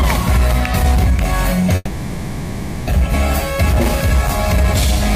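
From 1.75 to 2.89 s there's what sounds like a long network dropout: about 1.1 s of audio likely never arrived. The last sound is smeared on as a fading buzz for the whole gap, then the audio picks up further along with that stretch simply gone.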